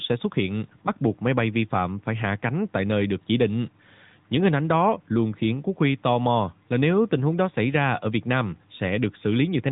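Throughout, AMR narrowband mobile coding removes everything above 3.8 kHz and leaves the speech plainly buzzy and synthetic, consistent with a high-rate mode near 10.2 kbps.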